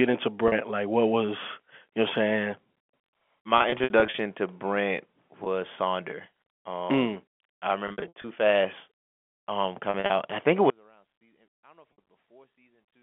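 Packet loss with pitch repetition shows up at 0.48, 3.58 to 4.18, 5.44, 7.88 to 8.24 and 9.90 to 10.10 s. The receiver loops the last pitch period, so the single gaps sound like a quick buzzy hold, and the scattered bursts get choppy. Then at 10.7 s the speech drops out to a faint residue about 35 dB down and stays there to the end. That's likely the signal being lost while the path after the break stayed live. Inside that gap there's one more 60 ms loss, at 11.93 s.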